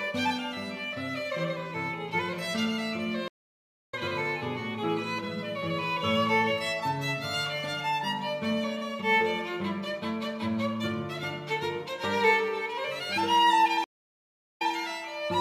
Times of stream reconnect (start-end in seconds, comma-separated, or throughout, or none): 3.28-3.94, 13.84-14.72